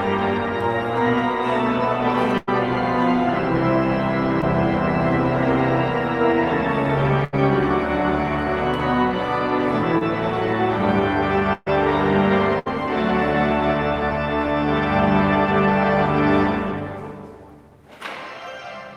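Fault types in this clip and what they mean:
Burst of packet loss: Several consecutive packets arrived too late or not at all, so the receiver carried the last sound forward and let it fade before playback jumped ahead. It happens at 2.37–2.49 s, 7.24–7.35 s, 11.53–11.68 s and 12.59–12.68 s, dropping 100, 80, 140 and 60 ms of audio. The 11.53 s gap includes about 10 ms of silence. Unlike the shorter kind, each is long enough to hear the held sound die away and the skip that follows.
Short concealed packet loss: About 20 ms went missing once at 4.41–4.44 s and once at 9.99–10.03 s, and the decoder patched each hole by extending the preceding sound before blending back into the real signal. The result is only a brief smear or wobble. That sets it apart from the longer bursts, where the filled stretch is several times longer.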